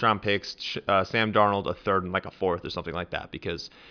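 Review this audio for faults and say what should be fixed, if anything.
No faults found, so nothing needs fixing.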